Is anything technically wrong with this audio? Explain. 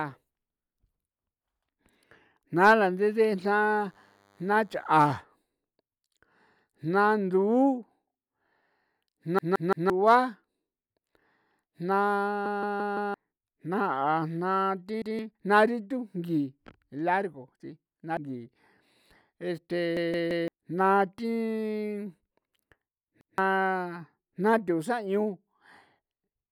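Yes, there are two problems. From 3.01 to 5.07 s there's a DECT cordless phone buzz: a thin, steady 100 Hz drone about 40 dB below the speech, from a nearby handset's 10 ms radio bursts being rectified in the audio circuit.

There are also repeated buffers at 9.39 to 9.90 s, 12.46 to 13.14 s, 15.02 to 15.19 s, 19.97 to 20.48 s and 23.21 to 23.38 s. Each time, late data made the device replay its last chunk of roughly 171 ms, which fits an 8192-sample buffer. You hear one to four hard-edged stutter repeats per event, with up to about 0.7 s of speech lost.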